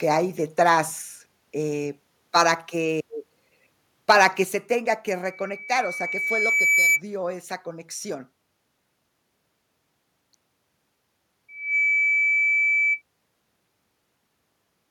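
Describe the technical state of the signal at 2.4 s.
At 2.4 s, lasting until 2.42 s, a brief harsh crackle sits on the peak of a loud syllable, a gritty edge where the speech should round off cleanly. This is microphone overload. The likely cause is an input level set too high, so the waveform peaks ran roughly 2 dB past the converter's ceiling and had their tops sheared flat. Only a small share of samples, around one percent, were cut.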